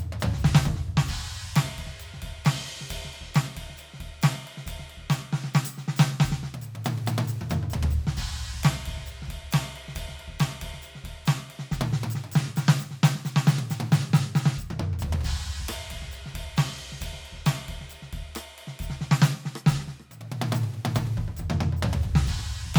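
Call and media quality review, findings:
No faults found in the music track. Nothing requiring a ticket was heard on review.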